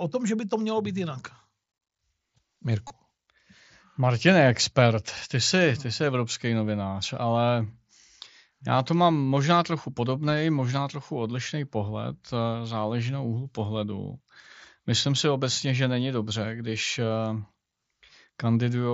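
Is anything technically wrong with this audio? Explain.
Yes. At 2.88 to 2.90 s there is concealed Bluetooth headset packet loss. About 22.5 ms of audio, which fits roughly three lost mSBC frames, never reached the phone over the headset link, so the receiver filled the gap by repeating the best-matching recent stretch of waveform. The result is a brief buzzy, held tone with a slight warble as the real speech resumes. Around it, the wideband mSBC headset codec carries the speech up to 8 kHz with light graininess.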